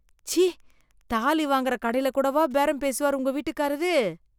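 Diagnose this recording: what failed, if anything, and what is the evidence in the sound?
Wi-Fi interference in the analogue wiring stage, from 0.0 to 2.56 s: a very faint, regular ticking roughly ten times a second, well below the speech. A nearby radio's beacons, every 102.4 ms, are rectified by the circuit. A spectrogram shows thin broadband vertical lines spaced evenly.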